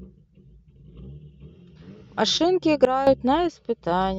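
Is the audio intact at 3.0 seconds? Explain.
No, not quite. At 3.0 seconds you're inside a sudden gain jump that runs from about 2.85 to 3.07 s. The level drops by about 12 dB in one step, with no fade, and the speech and the background noise fall together. That's most likely a gain setting or bit shift applied instantly instead of ramped, so the whole signal is scaled at once until it comes back up at 3.07 s.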